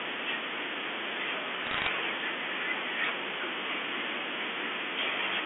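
Bit errors on a digital phone line appear from 1.64 to 1.88 s as a burst of sharp ticks and crackle over the speech. A little under one percent of the bits in the G.711 stream were flipped. Each hit corrupts a single sample, and those striking sign or high-order bits produce the loudest clicks.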